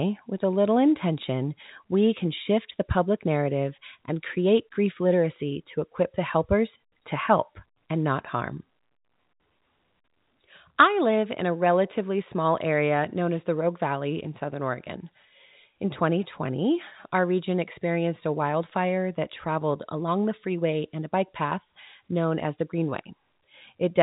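No technical faults are audible.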